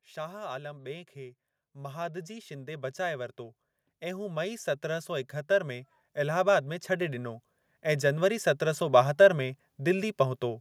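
Automatic gain rising runs from 0.14 s to 9.11 s: the gain control judged the input too quiet and kept lifting its gain, by about 17 dB overall, so the speech and the background noise swell steadily louder together.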